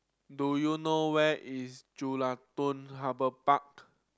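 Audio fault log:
No faults heard in this clip.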